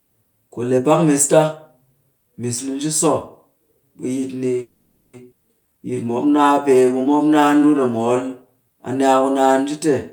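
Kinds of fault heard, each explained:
Call audio freeze: at 4.61 to 5.15 s the speech halts and the last sound is stretched into a fading buzz for about 520 ms, likely because packets stalled and the jitter buffer ran dry. When audio resumes it picks up where it stopped, so nothing is lost, only delayed.
Skip ahead: at 5.31 s playback jumps forward with a gap of barely 10 ms, and roughly 0.4 s of speech is simply gone. A stretch was dropped while later audio was already queued, splicing the two sides almost directly together.
Jitter buffer slow-down: from 5.67 to 8.65 s the speech runs at about 88% speed with unchanged pitch, as the receiver repeats single pitch periods and slivers of pauses to rebuild its reserve, adding 357 ms and leaving sounds audibly drawn out.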